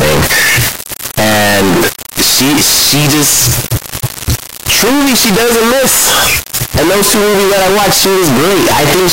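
Float read as integer runs throughout the speech: the samples were likely written as 32-bit float and decoded as 32-bit integer, so sign and exponent bits dominate. The waveform turns near-square at an almost fixed, high level, harsh and loud, with background noise matching speech level, though pitch survives.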